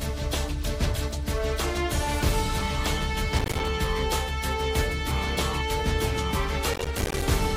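Processor overload crackle hits from 3.39 to 3.68 s and again from 6.74 to 7.22 s. The processor repeatedly misses its deadlines for very short buffers, around 5 ms each, and each miss drops to silence with hard edges. Some 20 of these gaps in the first burst and about 40 in the second make a gritty, tearing crackle.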